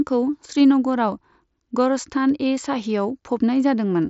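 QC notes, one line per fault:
Nothing to flag on this speech clip, which comes over a Bluetooth mSBC headset link with the top end stopping around 7.7 kHz, as you'd expect from that codec.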